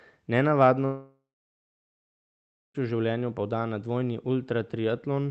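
At 0.85 s the speech breaks off and nothing new is heard until 2.76 s, a gap of about 1.9 s that is likely a long network dropout. The receiver stretches the last sound into a brief fading buzz or hiss, then about 1.53 s of near-silence follows. Speech resumes mid-flow with "v življenju poda na", the lost part simply gone. On a waveform this is a short decaying tail and then a flat line. A spectrogram shows a blank band across all frequencies, under a ceiling near 8 kHz from the call codec.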